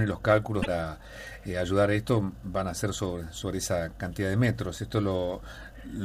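Damaged data in the compressed stream hits at 0.59 to 0.67 s. The decoder misreads corrupted frames, loses sync, and a brief glitch results.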